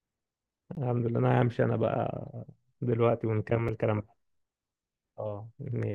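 At 0.75 s and 3.68 s the speech drops into a block of digital silence, about 17 ms and then 5.3 ms of silence, the second fitting a missed 256-sample buffer. Unlike a faded dropout, the abrupt edges give a brief hole and a tick.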